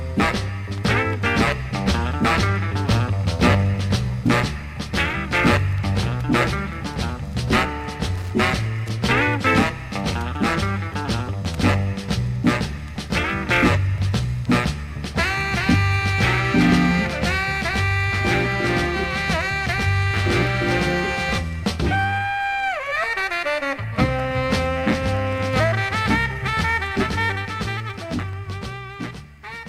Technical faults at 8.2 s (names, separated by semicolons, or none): loose connector crackle